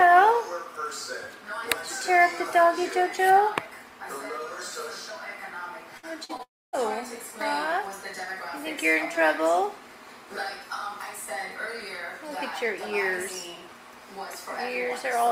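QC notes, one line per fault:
5.97–6.05 s, burst of packet loss: the last sound is held and fades for about 55 ms, then the audio resumes slightly further on with roughly 60 ms skipped. Several consecutive packets failed to arrive in time, so the receiver extended the final received sound and lowered its level across the gap instead of cutting to silence. The jump forward afterwards is the missing stretch that was never played.
6.25–6.31 s and 6.37–6.41 s, short concealed packet loss: two brief smears or wobbles, about 40 ms and then about 20 ms, where a short sound may vanish. In each case a small chunk never reached the decoder in time. The receiver bridged it by continuing the preceding sound and cross-fading back into the real audio, which leaves a soft blur rather than a hard click.
6.43–6.75 s, long network dropout: a fading continuation of the last sound, followed by near-silence for roughly a quarter of a second, with about 300 ms of audio lost before playback returns. 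This is likely a sustained interruption in delivery. The receiver's attempt to extend the final sound runs out of plausible material and decays away, and the content from that span is gone when the audio comes back.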